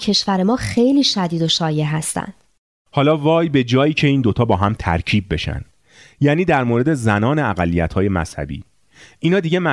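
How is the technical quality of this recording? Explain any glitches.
No glitches can be heard anywhere in the recording; the signal stays steady and continuous all the way through, with no technical fault to explain.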